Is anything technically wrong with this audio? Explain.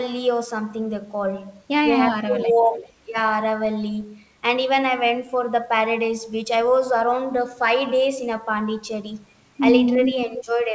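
Yes, two kinds of trouble show up, both around the same call-echo handling.

Speech suppressed in double talk hits from 2.13 to 2.65 s and again briefly around 10.26 to 10.33 s. The voice dips by roughly 15 dB in the first stretch, about 10 dB in the second, likely because the echo canceller couldn't tell the talker from the far side's echo and ducked both.

There's also an echo leak, a delayed copy of the voice trailing about 377 ms behind, faint (around 20 dB down) from 2.61 to 2.87 s, then much stronger (only about 5 dB under the speech) from 10.02 to 10.64 s. That's likely a loudspeaker echo the loudspeaker side's canceller didn't fully remove. The whole thing sits under an 8 kHz ceiling, which fits a 64 kbps G.722 call path.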